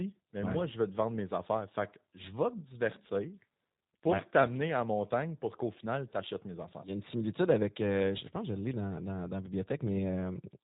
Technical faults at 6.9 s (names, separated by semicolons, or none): G.729 codec